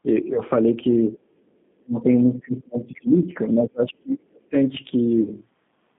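Speech heard through a narrow line band of about 150 Hz to 3.6 kHz, with plainly audible G.729 codec damage throughout: a slightly rough, synthetic texture where the voice is rebuilt from a filter and a sparse pulse excitation. This fits an 8 kbit/s G.729 link rather than a simple band-limited channel, which would stay smooth without that roughness. VoIP packet loss concealed by the speech codec shows up twice: from 0.34 to 0.40 s after a 20 ms loss, and from 5.22 to 5.34 s after a 40 ms loss. Instead of silence, the sound is stretched out and fades, and it stays weak past the gap as the decoder recovers, which is how it differs from a clean dropout or a click. Speech suppressed in double talk appears as two dips in the talker's level, from 1.79 to 2.09 s (falling by around 40 dB) and from 2.25 to 4.55 s (about two seconds, down by around 30 dB). These are most likely the echo canceller turning the line down while the far side talks. 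A packet gap would be brief and buzzy, whereas these drops are longer. Inside that stretch, from 2.95 to 3.01 s, a faint scrap of the other side's voice leaking through can be heard, roughly 30 dB below the speech. This is a second voice rather than a distortion of the first, which separates it from codec artefacts, and it is likely residual loudspeaker echo that the canceller did not fully remove.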